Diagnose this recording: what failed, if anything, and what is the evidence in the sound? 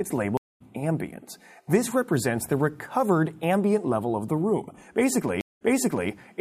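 A stream reconnect at the network stage, twice. At 0.37 s the audio goes silent for 230 ms and resumes a little past where it left off, with the span ending at 0.62 s. At 5.41 s a 198 ms silence is followed by audio that restarts 0.49 s earlier, repeating material, with the span ending at 6.10 s. A plain dropout would leave a gap in continuous material. Here the position jumps and a fresh decoder starts up after each break.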